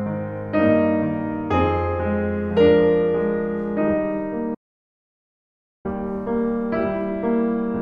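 A short piece of music with one clear audio dropout to silence: at 4.55 s the sound cuts off dead and stays silent, with no room tone at all, until 5.85 s, so about 1.3 s of the music is simply gone. That's most likely a lost input, a disconnected device or a stray mute, while the recorder kept writing.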